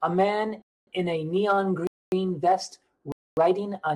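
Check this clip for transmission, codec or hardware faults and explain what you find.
The speech drops into hard-edged holes of silence at 0.62–0.87 s (just before "in a"), 1.87–2.12 s and 3.12–3.37 s. This is a gap between chunks: the audio arrives in 1 s chunks, and 250 ms of silence sits at each join, so the sound is interrupted rather than lost.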